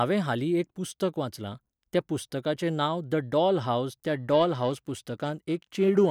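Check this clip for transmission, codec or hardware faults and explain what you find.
One hardware fault is audible: periodic clock jitter in the converter, running from about 3.99 s, just after "डॉल हावज", to the end of the speech at 6.11 s. A periodic disturbance is wobbling the sampling clock at around 1 kHz, so each frequency component in the voice gains sidebands roughly 1 kHz above and below it, strongest around the higher components. It sounds like a rough, metallic edge on voiced sound that disappears in pauses. On a spectrogram, parallel copies of the harmonics sit about 1 kHz away from each one.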